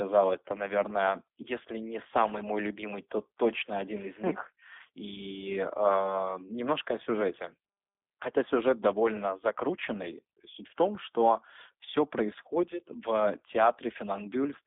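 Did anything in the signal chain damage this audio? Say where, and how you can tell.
Yes, at the codec stage, across the whole clip. The speech is band-limited to 300 Hz to 3.6 kHz, with nothing above 3.7 kHz, and sounds rough and synthetic. This is G.729 coding, consistent with 8 kbit/s, rebuilding each 10 ms frame from a vocal-tract filter, pitch predictor and sparse pulses.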